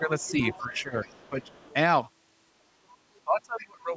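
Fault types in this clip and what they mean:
Speech suppressed in double talk: The talker's level sinks while a second voice is present, most likely because the echo canceller turned everything down when it could not tell the talker from the loudspeaker echo. There are brief dips of roughly 10 dB at 0.0–0.1 s and 1.3–1.5 s, a deeper one of about 15 dB at 0.6–1.07 s, and a heavy cut of about 30 dB across 3.24–3.96 s.
Other side's voice leaking through: A second voice sits under the talker, likely far-end audio from the loudspeaker that the echo canceller did not fully remove. It is about 15 dB below the speech at 0.19–0.82 s, fainter at about 30 dB below at 1.01–1.74 s, and a short scrap about 20 dB down around 3.6 s. Unlike steady background chatter, it overlaps the suppression dips and comes and goes in fragments.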